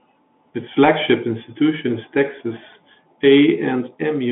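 From start to finish the speech has that Bluetooth CVSD headset codec sound: a one-bit adaptive delta coder, fitting a 64 kbps link, squeezing it into roughly 150 Hz to 3.5 kHz with nothing above 3.8 kHz. Its step size lags loud highs, so s sounds come out scratchy over a granular hiss, and the codec damage is plainly audible.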